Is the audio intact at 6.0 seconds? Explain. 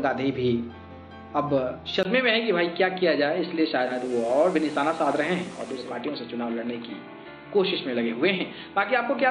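No. At 6.0 s two faults overlap. From 2.03 s to the end, the input switched to a poorer device, likely a different microphone or a headset's call profile. The band narrows and a new noise floor sits about 40 dB down. It is marked by a 20 ms gap at 2.03 s rather than a fade, and the level stays about the same.

From 3.76 s to 6.03 s, a digital radio is blending to analogue FM. The receiver lost the digital stream and cross-faded over 381 ms to the analogue broadcast, adding hiss roughly 25 dB below the signal at an unchanged level. At 6.0 s it is finishing its fade back to digital, so the hiss is receding. This gradual blend and the hiss that comes and goes set it apart from the hard, lasting switch of input device.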